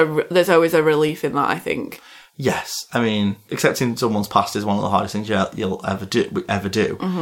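At 1.09 s a single sharp click cuts through the speech. It likely comes from dropped samples: a fraction of a millisecond of the stream went missing, so the waveform jumps abruptly to a later value, leaving a thin vertical line across the spectrogram.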